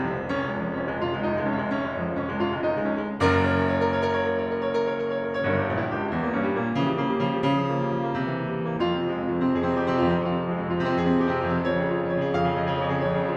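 A short piece of music with no technical faults to point out anywhere in it.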